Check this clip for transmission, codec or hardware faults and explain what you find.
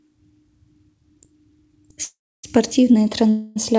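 Two call audio freezes break up this speech, from 2.04 to 2.45 s and from 3.29 to 3.58 s. The likely cause is late packets draining the jitter buffer. The receiver stretches the last sound into a fading buzz. In the first freeze it decays to near silence for about 0.28 s. The second, 0.26 s long, never fully goes quiet. Speech then resumes where it stopped, with nothing lost but now later. The G.722 call path can be heard as nothing above 8 kHz.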